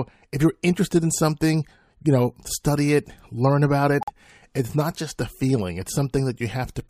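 Bit errors in the compressed stream left a short run of frames the decoder could not accept, and the player substituted silence: a corrupt frame muted fault from 4.01 to 4.10 s, right after "study it learn about". The speech cuts to dead silence abruptly for about 88 ms, fitting a few codec frames, then resumes on time.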